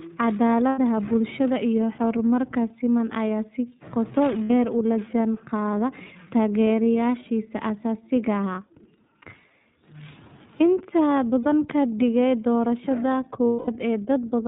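The whole recording passes through the iLBC codec, whose plainly audible damage suggests its 13.33 kbps mode with 30 ms frames. Nothing above 4 kHz survives, so the speech sounds narrowband, somewhat rough and synthetic. Lost iLBC frames then interrupt it four times, at 0.69 to 0.79 s, 4.44 to 4.50 s, 11.43 to 11.47 s and 13.47 to 13.69 s. Each time the decoder repeats the last pitch cycle with added noise, so each gap sounds like a held, buzzy vowel. The gaps last about 90, 60, 30 and 210 ms, which fits runs of three, two, one and seven lost frames. In the 210 ms gap the held sound fades away. After every gap the voice is right again almost at once.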